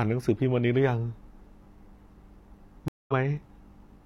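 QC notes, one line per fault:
2.88–3.13 s, stream reconnect. The speech cuts to silence for 200 ms, then resumes roughly 150 ms further on, so a sliver is skipped. The connection dropped and the player restarted a fresh decoder mid-stream, catching up to the live point.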